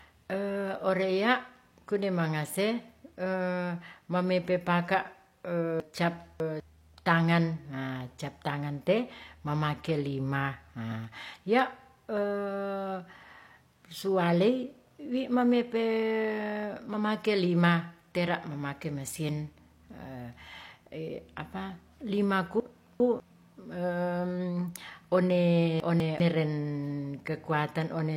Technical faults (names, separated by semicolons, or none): chunks out of order